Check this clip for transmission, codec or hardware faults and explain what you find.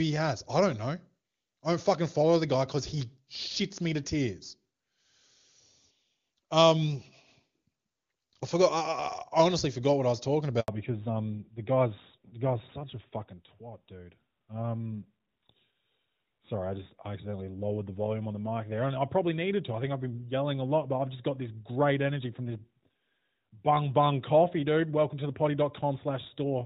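Two faults are present: a handover gap followed by a fallback to narrowband, both just after "what I was talking".

Handover gap, 10.60 to 10.68 s: the call was switched between networks and no speech frames arrived during the 80 ms switch. The audio drops out completely for that span, and anything spoken during it is lost.

Fallback to narrowband, 10.68 s to the end: after the handover the call is carried by an older narrowband codec instead of HD Voice. Before the switch, wideband detail is audible, consistent with AMR-WB at a high rate such as 23.85 kbit/s. After it, nothing above 4 kHz passes, which fits AMR-NB at 12.2 kbit/s, and the voice sounds duller.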